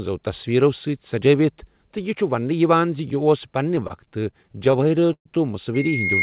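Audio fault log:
3.76 to 5.27 s, repeated stalls (stutter): The speech drags and catches about twenty times in this span. Packets arrived late, so the jitter buffer kept running dry. Each time, the receiver stretched the last sound to cover the wait. About 354 ms was filled this way, close to a quarter of the span. The longest hold is about 126 ms. Nothing is lost, but the rhythm stumbles.
5.74 to 6.23 s, loudspeaker feedback squeal: A steady tone at 2.1 kHz rises out of the audio and runs to the end of the clip. A microphone is picking up its own loudspeaker, and at this frequency the loop gain exceeds one. The tone therefore feeds on itself and keeps climbing. It ends far louder than the speech, roughly 15 dB above it. It sits well inside the call's band, which stops at 4 kHz.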